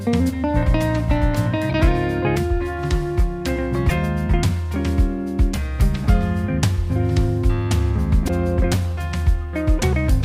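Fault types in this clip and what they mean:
Broken MP3 bit reservoir: The sound jumps ahead with a short garbled break of about 30 ms at 1.69, 3.88 and 8.27 s. Each lasts roughly one 26.1 ms frame. The likely cause is missing frames leaving the next frame to decode borrowed bytes from the wrong data.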